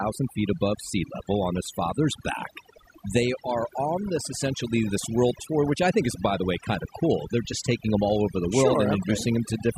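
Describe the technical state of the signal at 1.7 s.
At 1.7 s, as throughout, overdone noise removal gates weak bands: the background drops and breaks up into twinkling specks, and the spectrogram shows isolated speckled islands.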